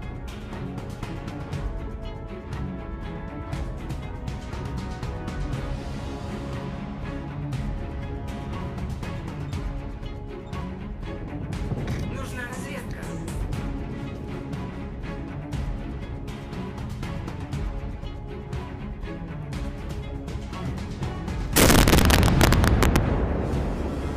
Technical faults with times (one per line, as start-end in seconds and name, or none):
21.56-22.96 integer overflow